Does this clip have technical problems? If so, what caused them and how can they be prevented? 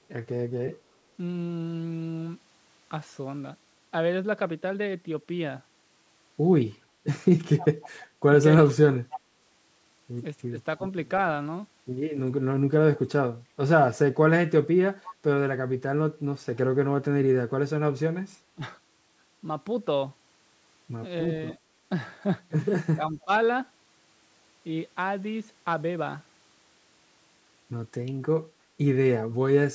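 Yes. Echo leak: the far end was likely on a loudspeaker, and its echo canceller let part of this talker's own voice back up the line. That produces a faint delayed copy of the speech trailing about 308 ms behind the original at 7.57–7.89 s, 9.1–9.2 s and 15.03–15.13 s. It sits roughly 15 dB below the speech in the first two spots and about 20 dB below at 15.03 s. Using a headset at the far end, or better acoustic echo cancellation there, prevents it.

Speech suppressed in double talk: when both sides spoke at once, the echo canceller likely could not tell this talker from loudspeaker echo and attenuated everything. The speech dips at 10.49–10.57 s (about 15 dB) and at 18.55–18.62 s (about 20 dB). The longest gap runs from 22.94 to 23.31 s, where the voice drops out for roughly 300 ms by about 20 dB. Echo cancellation with stronger double-talk detection, or headsets that remove the echo path, prevents these dropouts.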